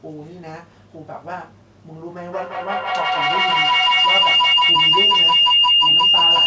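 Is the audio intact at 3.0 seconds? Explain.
No. At 3.0 seconds a feedback howl is building, a piercing tone around 3 kHz with a loop delay of roughly 150 ms and peaking about 13 dB above the speech. From 2.32 s to the end, two devices in the same room are on the call and a microphone re-captures the other device's loudspeaker output, each trip adding level.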